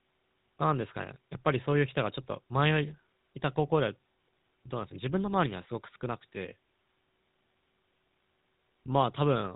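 From start to finish the speech has been through the GSM full-rate codec, which models the vocal tract and drives it with a coarse, regularly pulsed excitation, consistent with a 13 kbps GSM link. Nothing above 4 kHz survives, and the speech sounds plainly buzzy and gravelly.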